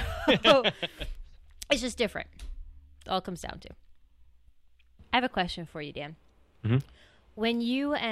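Nothing is technically wrong with this speech recording.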